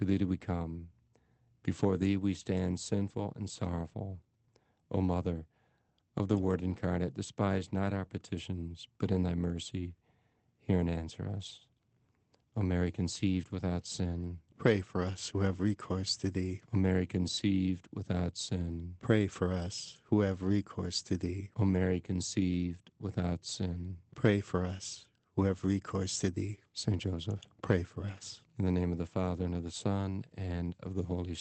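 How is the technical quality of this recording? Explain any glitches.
The recording has three brief spots where lost packets were rebuilt from error correction. It went through an Opus call path, with the sound topping out around 8 kHz. The first is at 6.33–6.43 s, right before "incarnate despise not our". The second is at 28.17–28.23 s, just after "pray for". The last is at 30.51–30.53 s. The rebuilt stretches run 60 ms, 40 ms and 20 ms, which fits three, two and one lost 20 ms packets. Each missing packet was replaced by the low-bitrate backup copy carried in the next one, so nothing drops out. Those moments just turn briefly grainier and noisier.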